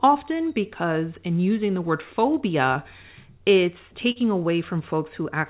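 Short concealed packet loss at 2.74–2.77 s and 4.11–4.17 s in this speech clip: about 20 ms and 40 ms of audio arrived too late, so the receiver extended the preceding sound to bridge each gap, leaving brief smears over a narrowband call sound with nothing above 4 kHz.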